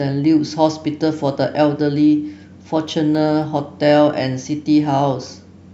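A disc scratch has damaged more data than the player's error correction could rebuild, so on each turn of the disc the player has patched over the lost samples, producing CD scratch ticks in this speech recording. Between 2.33 and 3.42 s there are five regularly spaced ticks, about four or five per second. Each is a tiny click or dropout lasting at most a couple of milliseconds, where the damaged samples were interpolated or muted.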